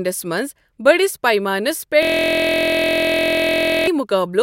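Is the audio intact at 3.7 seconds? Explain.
No. At 3.7 s the clip is inside a system hang loop running from 2.03 to 3.87 s, right after "بٔڑِس پیمانَس". A 23.22 ms slice, which fits a 1024-sample buffer, repeats identically about 80 times, producing a steady 43.1 Hz buzz. A decoder stutter would vary, but this repeats exactly.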